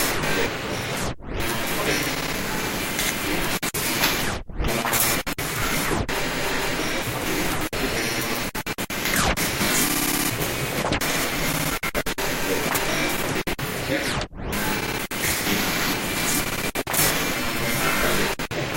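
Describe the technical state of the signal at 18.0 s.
At 18.0 s the audio is intact, with no technical fault to be heard at that moment.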